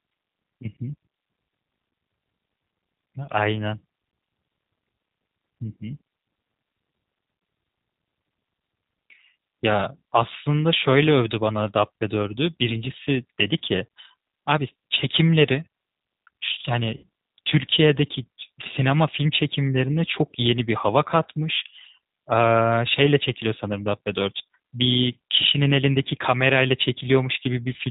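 Throughout, the G.729 codec caps the speech at 4 kHz, giving a rough, synthetic quality that fits an 8 kbit/s rate; a spectrogram shows nothing above that ceiling. From 16.97 to 17.03 s, VoIP packet loss concealed by the speech codec fills a 60 ms gap (consistent with three lost packets) with a fading extrapolation, visible as a sagging waveform envelope.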